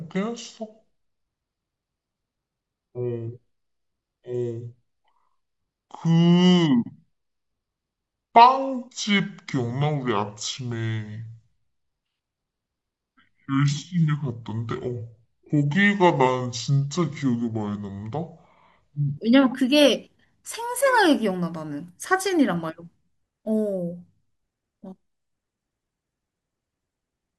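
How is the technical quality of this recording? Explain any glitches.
The recording has one clear problem: a section at the wrong speed, from 0.0 to 19.17 s. This stretch plays at 0.64 times its proper rate, likely because it was run against the wrong clock during editing or playback. Speed and pitch fall together, so the speech is dragged out and lowered by roughly seven semitones, sounding deep, heavy and slowed until the section ends at 19.17 s.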